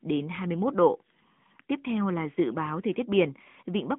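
From start to finish the speech carries AMR narrowband mobile codec damage, plainly audible. Everything sits in a phone-line band of roughly 150 Hz to 3.4 kHz, and the coarse vocal-tract modelling, which fits the 10.2 kbps mode, leaves the voice buzzy and synthetic.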